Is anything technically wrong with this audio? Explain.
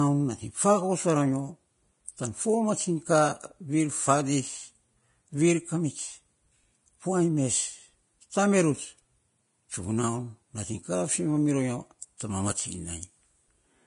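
Yes. Throughout the speech, the treble sounds hissy and grainy, with a rough, granular sheen, smeared consonant attacks, and nothing at all above about 10.6 kHz. This is likely heavy Vorbis compression at a low bitrate, roughly 30 kbps. To save data, the encoder removes the top band and quantises the remaining upper frequencies so coarsely that their fine detail is replaced by noise of similar energy, which produces the grit and blur.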